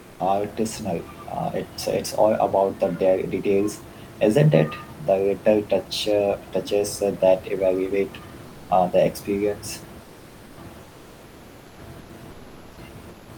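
Comfort noise in place of the background appears at 0.01–0.19, 10.03–10.57, 10.83–11.77, 12.31–12.77 and 13.09–13.29 s: the room background turns into smooth, featureless hiss about 2–4 dB quieter, likely from Opus DTX. On a spectrogram these stretches show as flat, uniform bands.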